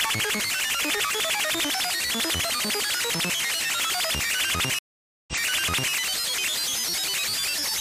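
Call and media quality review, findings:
Stream reconnect, 4.79 to 5.93 s. Dropout of 0.49 s, then the sound resumes 0.65 s earlier, so a short section repeats. Player or network path: connection dropped, client reconnected, and a fresh decoder restarted on a resent burst mid-stream.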